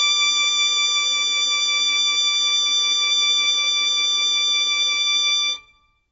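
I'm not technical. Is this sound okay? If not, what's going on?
No. The music sounds dull and watery from start to finish, with nothing above 7.6 kHz, most likely from heavy MP3 compression discarding detail to save space.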